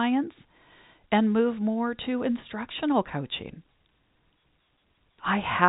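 No technical faults can be heard in this speech.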